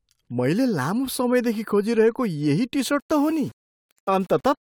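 Low bit depth without dither affects this speech from 2.99 s to the end, right after "समयदेखि खोजिरहेको यही": quiet passages turn gritty, with grainy distortion tracking the sound about 35 dB down. The likely cause is plain rounding to roughly 7 bits, without dither.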